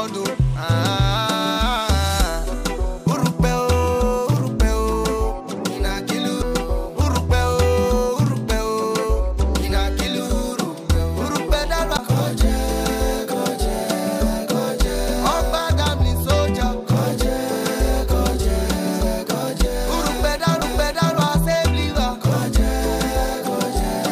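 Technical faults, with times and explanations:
6.42 s, 11.97 s and 20.61 s, CD skip: the laser jumps to a different turn of the disc's spiral, so playback briefly mutes, for a few milliseconds at 6.42 and 20.61 s and about 10 ms at 11.97 s, then resumes elsewhere. Each is heard as a tick and an abrupt jump in the audio.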